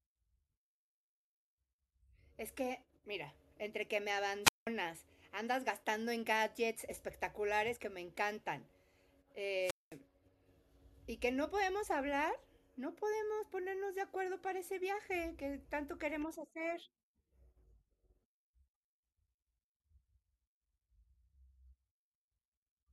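Wireless microphone squelch dropouts occur at 4.43 to 4.67 s and 9.59 to 9.98 s. The radio signal fades, hiss briefly rises, then the receiver's squelch mutes the output for about 190 ms and 210 ms respectively before the speech returns.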